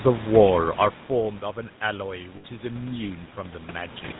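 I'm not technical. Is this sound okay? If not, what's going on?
No, there are three problems.

First, the whole clip has passed through the GSM full-rate codec, the speech coding used by early mobile phones. It rebuilds the voice from a simple model of the throat and mouth and keeps only part of the detail. Everything above 4 kHz is gone. The result is a buzzy, gravelly roughness on the speech from start to finish. It is plainly audible here.

Second, there is automatic gain rising. From 1.08 to 4.03 seconds the incoming sound got quieter. The phone's level control reacted by slowly turning itself up. You can hear the voice and the background swell together. It happens gradually over those three seconds, not in a sudden jump.

Third, there are lost GSM frames at 2.36 seconds. A short piece of the signal, about 80 milliseconds, never arrived intact. The phone filled the gap by repeating the last good piece. 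This makes a brief, rough, metallic ring where speech should be. It lasts until 2.45 seconds. Then the normal sound returns.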